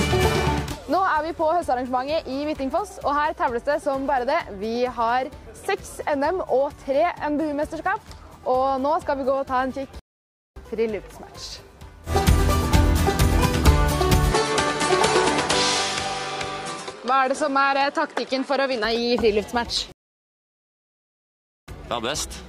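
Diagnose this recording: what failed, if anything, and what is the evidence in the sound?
Two stream reconnects occur at the network stage. From 9.99 to 10.59 s the sound goes silent for about 0.57 s, and when it returns it has jumped roughly half a second ahead. From 19.92 to 21.70 s a longer silence of about 1.76 s is followed by a skip of roughly 0.7 s. A plain packet dropout would leave a gap and continue where it stopped. Here the content moves forward, which shows the player lost the connection, reconnected and restarted its decoder at the live position.

Between 14.32 and 18.85 s the sound turns duller. Nothing is present above 11.4 kHz, and a new noise floor appears, roughly 35 dB below the signal. The level stays the same, there is no gap at either edge, and the full band returns at 18.85 s. That points to the driver or device stage, most likely an input switched to a poorer device. 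A codec lowpass would not bring in its own background noise.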